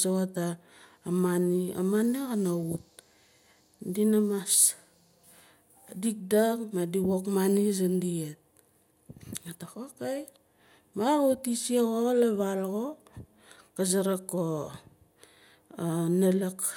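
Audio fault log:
No fault is heard in this speech clip.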